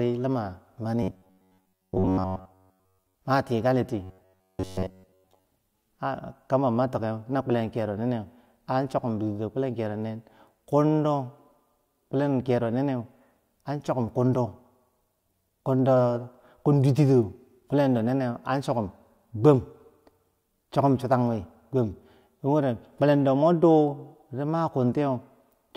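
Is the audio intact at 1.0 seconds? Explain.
No. From 1.03 to 3.15 s the speech becomes a rigid metallic buzz near 93.8 Hz, robotic sound likely from repeated short buffers of about 10.7 ms replacing most audio.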